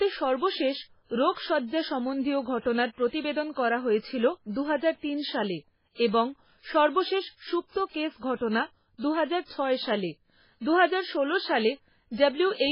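Throughout the speech, the damage points to MP3 compression at a severely starved bitrate, likely somewhere around 16 kbps. With so few bits, the encoder has cut away everything above 5.3 kHz and zeroed many of the weaker frequency lines, letting them flicker in and out between frames. The result is dull, band-limited audio with a heavy watery, swirling texture. Sibilants come through as metallic chirps, and consonant onsets sound smeared rather than crisp.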